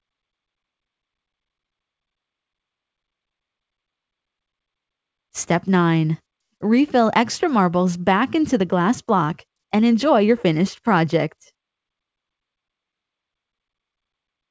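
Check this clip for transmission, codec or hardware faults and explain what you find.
No transmission, codec or hardware faults are audible; the band stops at 8 kHz, as expected for a call path consistent with G.722 at 64 kbps.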